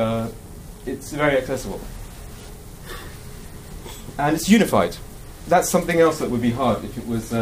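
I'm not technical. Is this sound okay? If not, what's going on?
Yes, the sound is fine: nothing in it points to a technical problem with how it was recorded or played back.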